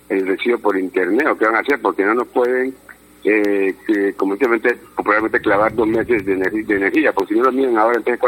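From about 0.2 s right through to 8.19 s there's a steady tick every 0.25 s, so four a second, around thirty in all. These are periodic USB or driver dropouts. Something is stalling the bus or driver on a fixed schedule, and each time a tiny slice of audio, well under a millisecond, drops out and is left as silence. You hear it as a regular ticking that rides along with the signal.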